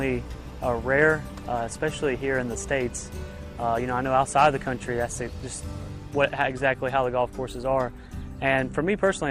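Nothing stood out on listening to the audio.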